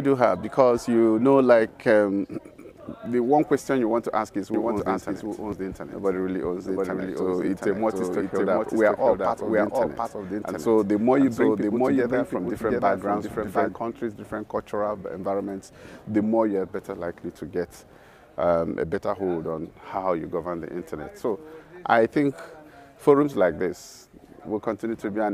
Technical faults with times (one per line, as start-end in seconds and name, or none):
4.54-13.74 doubled audio track